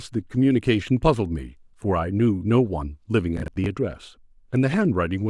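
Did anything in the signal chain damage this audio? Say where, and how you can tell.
Yes: processor overload crackle from 3.37 to 3.66 s in the speech. The driver or buffer stage missed a run of deadlines, about five buffers of roughly 20 ms each. Every miss replayed a scrap of old audio with hard edges, which is heard as a gritty tearing burst riding on the sound.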